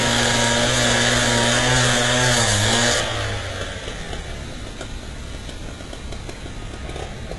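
Throughout, likely HE-AAC compression at a very low bitrate rebuilds the treble from copied lower bands. It stops at 11.4 kHz and sounds gritty and metallic.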